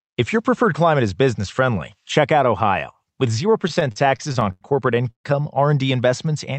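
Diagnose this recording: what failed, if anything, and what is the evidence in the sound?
Repeated stalls (stutter) run from 3.61 s to 4.63 s, a network and jitter-buffer fault. The speech catches twelve times in about a second, with roughly 234 ms of held-over sound spread through that span, close to a quarter of it, and the longest hold lasts 87 ms. Packets were reaching the receiver more slowly than they were being played out, so the buffer kept draining. Each time it did, the decoder extended the last sound until the next packet arrived. Nothing is lost, but the passage drags and judders.

A short stall from a late packet follows at 5.03 to 5.06 s, again at the network and jitter-buffer stage. For about 16 ms one sound is held slightly too long, with a slight buzz or dip. A single packet arrived 16 ms after it was due to be played. The receiver stretched what it already had to cover the wait and then resumed at the same point, so only timing is disturbed.

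A call audio freeze sits at 5.10 to 5.26 s. The sound hangs as a fading buzz for about 137 ms, of which roughly 100 ms decays to silence before the speech picks up where it stopped. The likely cause is packets held up in transit, which left the jitter buffer empty long enough for the concealment to fade out completely. The Opus path limits the audio to an 8 kHz bandwidth throughout the clip.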